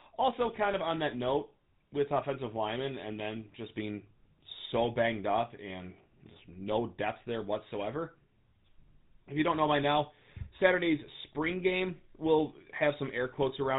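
From the first second to the last, the speech carries GSM full-rate codec damage: nothing above 4 kHz, and a buzzy, gravelly roughness from sparse pulse excitation, consistent with 13 kbps.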